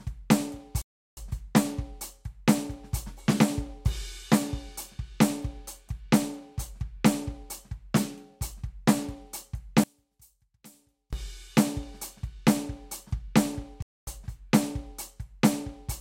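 At 0.82 s the player likely ran short of data or had its thread blocked. This is a playback stall, and the music cuts to silence in mid-flow for about 0.35 s before it comes back at 1.17 s. The gap is long enough to hear clearly as a hole in the music.

From 9.84 to 11.13 s, one channel was likely inverted, with its polarity reversed against the other. When the two channels are summed to mono, the material they share cancels. The level drops by about 30 dB, and the centred parts of the music nearly disappear. What is left is only the faint difference between the channels, and it lasts until normal polarity returns.

At 13.82 s a second playback stall likely comes from the same starvation or blocking. The music goes silent again, this time for about 0.25 s, and returns at 14.07 s.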